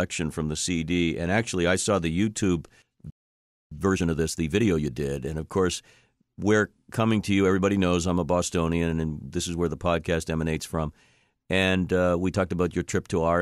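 Speech recording with a playback stall from 3.10 to 3.71 s: the audio cuts to silence mid-flow for about 0.61 s, then resumes, likely because the player's buffer ran dry or its playback thread was briefly blocked. Immediately afterward, from 3.71 to 4.93 s, time-compressed catch-up sets in. The player trims its accumulated backlog by dropping short segments and cross-fading across the gaps, so the speech runs at roughly 1.5x speed. The pitch stays normal.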